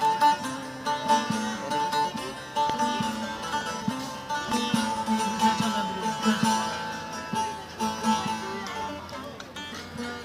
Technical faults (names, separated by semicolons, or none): loud pop